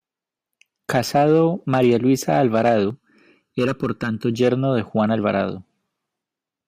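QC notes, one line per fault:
2.90–4.34 s, channel delay (comb filtering): one channel runs a little under a millisecond late, and the mono sum cancels at evenly spaced frequencies from around 700 Hz up, making the speech hollow and phasey. The notches stay fixed, unlike a flanger's sweep.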